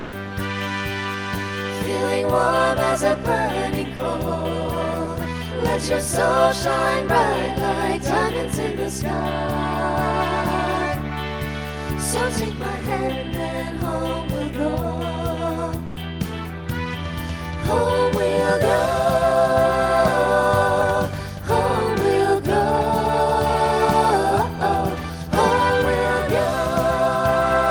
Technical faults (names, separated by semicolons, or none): sound dropped by the voice detector